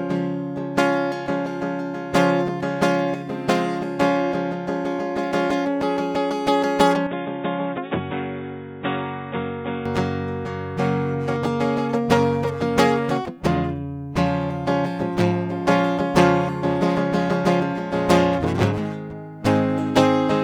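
An input switched to a poorer device runs from 7.07 to 9.86 s. The music turns suddenly dull and boxy, with nothing above 3.8 kHz, drops about 5 dB in level, and gains a faint new noise floor roughly 50 dB below the signal. There is no gap at either change. This is likely a mid-recording switch to a narrower-band microphone or headset profile before the original input returned at 9.86 s.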